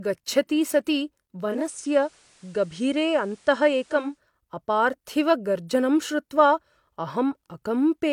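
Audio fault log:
1.37–4.22 s, digital radio blending to analogue: the receiver loses the digital stream and cross-fades over about 0.33 s to the FM broadcast of the same station, so hiss appears roughly 35 dB below the sound, with level unchanged, until it blends back before "अपार्थिवगर्जनं श्रुत्वा".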